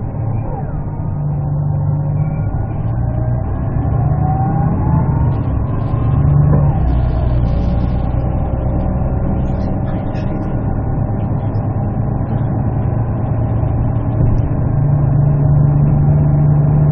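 At 2.94 s the audio jumps forward, a case of compressed frames skipped: a run of coded frames never reached the output, either missing or rejected by the decoder as corrupt, so roughly a tenth of a second of material is simply absent. The jump fits about four frames of 23.2 ms each. Because adjacent frames overlap, the seam sounds like a short smeared blip, not a sharp click. On a waveform the envelope changes abruptly there, and a spectrogram shows a faint vertical smudge where the patterns fail to continue.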